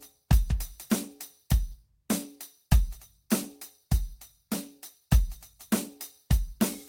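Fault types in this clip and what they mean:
No faults detected in the music.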